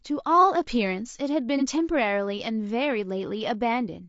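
Rough, grainy speech runs through the whole clip, with noise filling the gaps between voice harmonics and a thin, slightly synthetic top end. This is likely low-delay AAC compression such as AAC-ELD, whose short frames resolve pitch poorly, and the damage fits a low rate around 32 kbps. From 1.58 to 1.63 s a brief smeared, phasey patch is AAC frame loss with concealment. The decoder rebuilt the missing audio from the preceding spectrum, which points to a single lost frame of roughly 30 ms.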